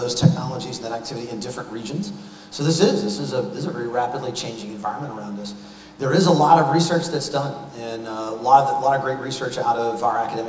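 No technical faults can be heard anywhere in the audio; the signal stays steady and intact throughout.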